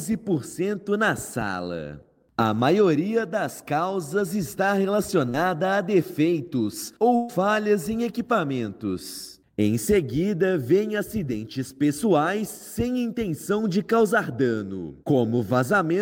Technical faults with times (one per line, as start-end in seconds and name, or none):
5.29-5.36 short concealed packet loss
7.16-7.31 burst of packet loss